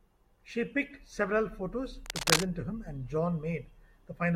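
Speech, with a burst of cable scratch noise from 2.05 to 2.45 s, right after "picked several photos" and before "to him and". It's a dense, ragged scratching that sits a bit louder than the talker, likely from a worn cable or connector being moved while its contact resistance jumped around.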